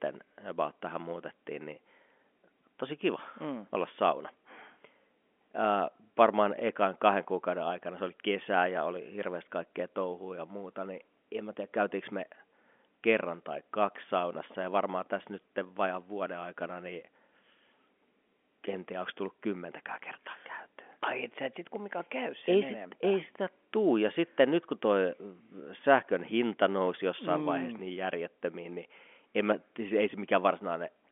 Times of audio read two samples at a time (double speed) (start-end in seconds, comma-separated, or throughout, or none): none